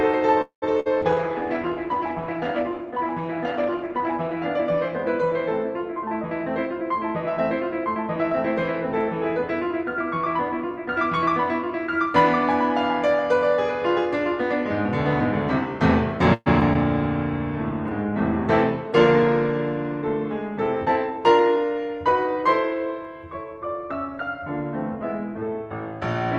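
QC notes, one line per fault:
0.41–0.64 s, call audio freeze: the music stalls. The last sound carries on as a fading buzz and then drops to silence for about 120 ms before the music resumes exactly where it left off. About 206 ms of extra time is inserted and nothing is lost. The likely cause is packets held up in transit, which let the jitter buffer run dry so the receiver had to stretch the last sound until they arrived.
0.80–0.88 s, burst of packet loss: a short, held, fading smear is followed by a jump forward in the music. About 55 ms is filled by continuing the last sound and turning it down, and about 60 ms of the music is missing. A few packets in a row were lost or arrived too late to play, so the receiver bridged the hole and then skipped ahead to the next audio it had.
1.02–4.43 s, call bitrate drop: the music turns duller and rougher, with a watery, coarse texture. The encoder falls from 32 kbps to 14 kbps and stays at the lowest rate for about 3.3 s. 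Its audio bandwidth narrows from 12 kHz to 8 kHz, so the top end is cut off. The call's bandwidth estimate fell, which forced Opus to spend far fewer bits until the rate recovered.
5.92–12.07 s, jitter buffer speed-up: the music runs about 3% fast at unchanged pitch, so the tempo loses its steadiness. Roughly a fifth of a second is removed in total. The jitter buffer had built up more audio than it aims for, so the receiver trimmed many short pitch-period slices in a row to bring the delay back down.
16.34–16.77 s, repeated packet loss (robotic sound): the music turns choppy over three closely spaced gaps, with about 35% of this span patched over. The concealment fills about 149 ms, the longest gap is about 122 ms, and about 40 ms of music is missing. Packets were lost again and again, and each hole was patched by extending the last sound just before the next one hit.
16.99–21.16 s, call bitrate drop: the music again sounds coarser and more watery. 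The bitrate falls from 32 kbps to 17 kbps and holds at that lowest rate for about 3.2 s. A renewed fall in the estimated bandwidth pushed Opus to code with far fewer bits until the rate recovered.
18.91–21.57 s, jitter buffer speed-up: overlapping the low-bitrate stretch, the music runs about 4% fast at the same pitch and the pulse loses its steady tempo. Roughly 150 ms is cut out. The receiver was again draining an overfilled jitter buffer by dropping many short pitch-period pieces in succession.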